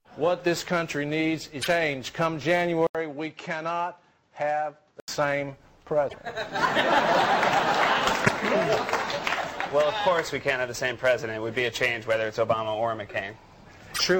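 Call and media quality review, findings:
Damaged data in compressed stream, 1.58–1.68 s, 6.05–6.15 s, 8.22–8.30 s, 13.91–14.01 s: short glitches as the decoder loses frame sync and skips ahead to the next header.

Input switched to a poorer device, 2.87–5.08 s: 80 ms gap, then sound dulls with nothing above 7.8 kHz, drops by about 5 dB, and carries new noise roughly 40 dB down. Likely cause is a fallback to a narrower-band microphone.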